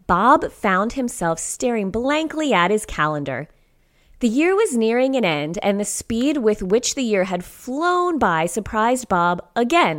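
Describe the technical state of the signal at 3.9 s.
At 3.9 s the speech signal is intact, with no audible dropout, distortion, or other technical fault.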